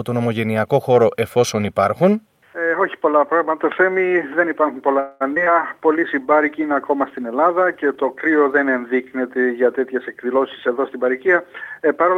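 A call audio freeze runs from 4.99 to 5.23 s. The last sound is drawn out into a fading buzz or hiss for about 211 ms, and then the audio carries on where it stopped with nothing lost, so everything after it plays about 211 ms later. The likely cause is packets held up in transit, which let the receiver's jitter buffer run dry and left it extending the final sound until delivery resumed. Short concealed packet loss follows at 5.35 to 5.38 s and again at 5.44 to 5.48 s. Each time about 20 ms of the original never reached the decoder, and the receiver patched the hole by continuing the preceding sound and then cross-fading back into real audio. Each patch comes through as a brief smear or wobble, and a short transient inside the gap can disappear. A call bitrate drop spans 5.88 to 8.88 s. The encoder's rate falls from 64 to 25 kbps and stays at that floor for about 2.9 s, after the link's bandwidth estimate collapsed. 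With fewer bits Opus quantises more coarsely and trims the top end, so the sound becomes rough, watery and somewhat muffled until the rate climbs back. A jitter buffer speed-up covers 9.94 to 11.87 s, with playback running at about 105% of normal speed. The buffer was holding more audio than its target, so the receiver repeatedly cut out short pitch-period-length pieces, about a tenth of a second in total. The audio sounds slightly hurried while its pitch stays the same.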